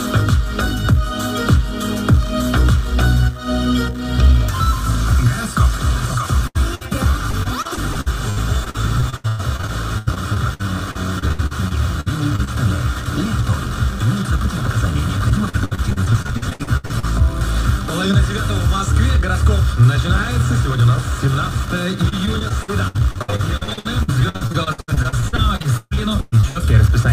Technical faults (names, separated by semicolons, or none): repeated packet loss (robotic sound)